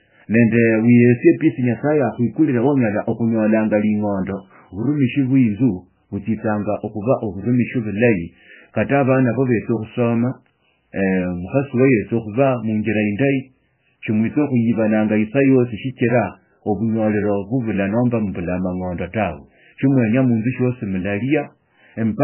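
From start to finish the speech carries heavy MP3 compression artefacts, likely from a very low bitrate around 9 kbps. Nothing survives above 3 kHz, so it sounds dull and band-limited, while weak spectral lines flicker on and off between frames, giving a watery, swirling texture and smeared consonant attacks.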